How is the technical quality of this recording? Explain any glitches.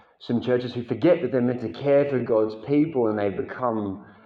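The recording has one clear problem: a time-stretched section running from 1.26 s to the end at 4.25 s. At that point the pace suddenly slows to about 0.65 times its earlier speed, while the pitch stays the same. The slowed part drags. The likely cause is software stretching that stretch of audio to fill a length, holding the pitch by repeating short fragments of the sound.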